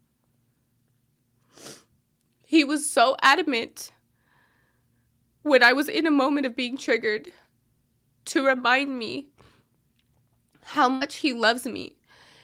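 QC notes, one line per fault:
10.95–11.03 s: burst of packet loss. Several consecutive packets failed to arrive in time, so the receiver extended the last speech sound for about 54 ms while fading it out, producing a brief held buzz or hiss; about 60 ms of speech is simply missing before playback resumes.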